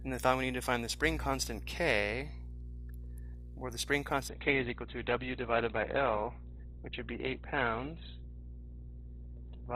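At 4.29 s the audio abruptly loses quality and stays degraded to the end at 9.76 s. Nothing above 4.2 kHz survives from that point, so the treble is gone and the top end turns dull. Codec artefacts rise. There is no gap at the switch. This is an adaptive stream at a lower bitrate, stepping down as the connection slowed. The sound fits a drop from 64 kbit/s Opus to 12 kbit/s.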